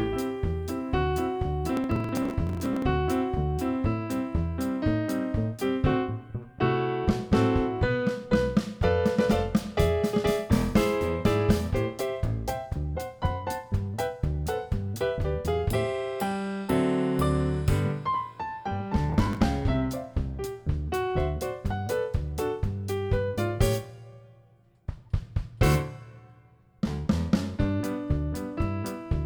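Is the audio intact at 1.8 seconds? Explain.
No. From 1.77 to 2.82 s the sound breaks up with processor overload crackle. The processor keeps missing the deadlines for very short audio buffers, which fits blocks of roughly a millisecond and a half, a few dozen times in a row, and each missed block is simply skipped. The result is a gritty, tearing crackle riding on the sound. A single dropout would leave one isolated gap. Here the hard-edged gaps come in a dense run and stop abruptly once the load eases.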